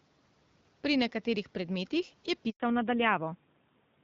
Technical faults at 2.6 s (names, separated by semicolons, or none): handover gap; fallback to narrowband